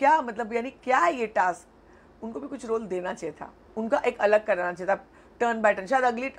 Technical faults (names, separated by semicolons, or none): none